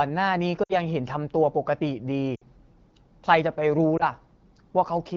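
At 0.63 to 0.73 s and again at 2.35 to 2.43 s, lost AMR speech frames make the speech drop to near silence within two frames, each fitting about three lost 20 ms frames. At 3.98 to 4.03 s a single lost frame leaves only a brief dip or warble. The decoder is reusing the last good pitch and vocal tract settings at falling gain. Unlike a plain dropout, there is no hard gap or click, and the wideband speech resumes weak or rough for a moment.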